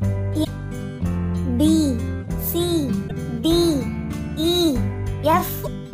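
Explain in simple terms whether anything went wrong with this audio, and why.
Something did go wrong: there is damaged data in a compressed stream. Small stretches of the stored file were corrupted, so the player could not make sense of those pieces and had to hunt for the next readable chunk before carrying on. Each time, you hear a brief chirp or blip, about 70 milliseconds long, where the sound should be. It happens three times: at 0.41 to 0.47 seconds, 3.05 to 3.11 seconds, and 5.61 to 5.68 seconds.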